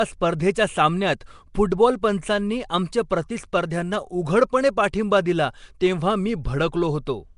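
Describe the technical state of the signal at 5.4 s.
At 5.4 s the speech carries Nellymoser compression, present across the whole clip rather than starting there. The sound is rough and hissy with a smeared, underwater quality, and the damage is plainly audible. This is likely the Flash-era codec coding 256-sample blocks at two bits per sample, filling starved bands with noise, which fits a rate near 44 kbps. A spectrogram shows a hard ceiling at 10.6 kHz and grainy, noise-filled patches between formants.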